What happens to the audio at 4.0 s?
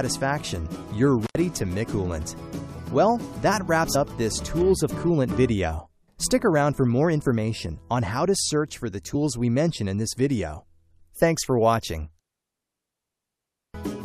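At 3.94 s there is a brief glitch from damaged data in the compressed stream. The decoder misreads a corrupted frame and loses sync.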